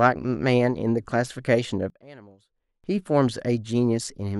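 A speech recording in which, from 1.9 to 2.84 s, the centred sound falls by about 26 dB to a faint residue, likely one channel inverted, so the shared content cancels when summed to mono. Unlike a dropout, a faint remnant persists instead of silence.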